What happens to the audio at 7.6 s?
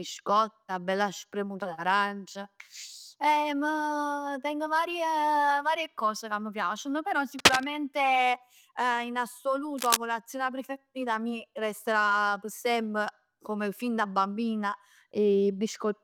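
Cable scratch noise runs from 7.39 to 7.64 s, just after "ca m' piaceno però". A worn cable or connector being moved is the likely cause, its contact resistance fluctuating rapidly and laying a dense, uneven burst of scratching over the speech, somewhat louder than the speech itself.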